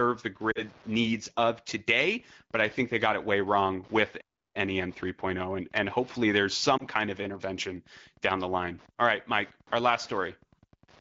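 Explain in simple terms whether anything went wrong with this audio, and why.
A few things go wrong here, and they're all on the delivery side.

Throughout, there's a faint, steady ticking about ten times a second. That's Wi-Fi interference: a nearby Wi-Fi radio sends a beacon every 102.4 ms, and the audio circuit picks it up and turns it into a quiet click each time.

At 0.51 to 0.62 s, just before "needs of today but", and again at 6.78 to 6.84 s, between "and hopefully there's" and "kind of intervention down", you get lost AMR speech frames. Radio errors corrupted small chunks of the call, about 40 ms the first time and 20 ms the second, which fits two frames and then one. The decoder covers each gap by stretching the last good sound and fading it, so you hear a brief dip or warble.

At 4.20 s, right after "it way wrong with", the sound cuts out for about a third of a second before carrying on. 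That's a playback stall, most likely the player running short of data or getting briefly held up.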